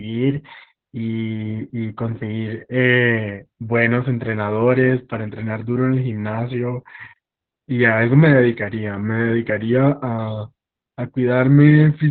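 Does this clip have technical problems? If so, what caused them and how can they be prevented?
Yes. Opus voice compression runs through the whole clip. Nothing is left above 4.5 kHz, and the speech sounds muffled, hoarse and slightly robotic, which fits a narrowband SILK encode at roughly 8 kbps with coarse excitation. Encoding at a higher bitrate with wideband or fullband enabled prevents this.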